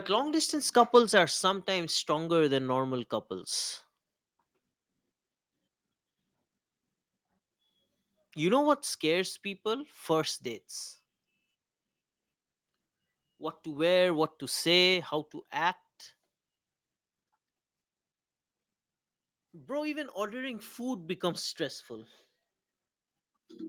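Microphone volume stepped down at 1.02 s and again at 14.94 s: the speech and its background drop abruptly, by about 2 dB then about 3 dB. This is likely call software lowering the input gain in a single step after judging the microphone too hot.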